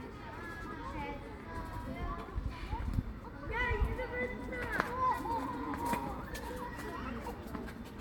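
No faults detected anywhere in the audio.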